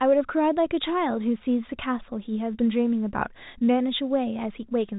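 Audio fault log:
No fault is present: the speech carries the narrow, sub-4 kHz band of ordinary G.711 telephone coding, consistent with a 64 kbps mu-law line, with at most a faint level-following quantisation hiss beneath it.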